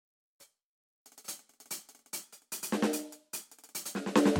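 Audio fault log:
2.23–3.70 s, drift correction step: the music lurches 6% faster and about a semitone sharp in one move, holds, then snaps back, likely a clock-matching resampler draining its buffer; tempo and pitch jumping together abruptly sets it apart from the gradual sway of wow.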